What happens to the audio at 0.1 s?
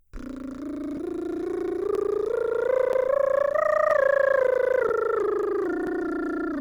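Nothing goes wrong at 0.1 s; the music plays through that moment intact, with no dropout, click or distortion.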